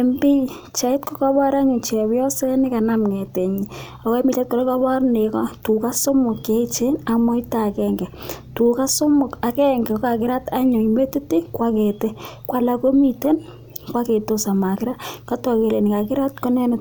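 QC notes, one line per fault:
No faults found in this speech recording. Nothing here needs a timestamp or a note.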